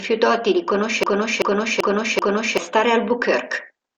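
The player or stream most likely stalled at 1.03 s and kept resending the last fragment it held, producing a broken-record loop that runs until 2.58 s. A slice of speech about 0.39 s long plays four times back to back, identical each pass, giving a stuttering, mechanical repetition. Whatever speech belonged in those one and a half seconds never arrives; the clip simply resumes after the final repeat.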